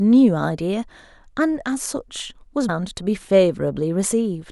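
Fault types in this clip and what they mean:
Compressed frames skipped: at 2.68 s the speech jumps ahead by roughly 150 ms, about seven 26.1 ms frames that the decoder never played. Unlike a dropout, no silent gap appears, and overlapping frames smear the join into a brief blip, not a sharp click.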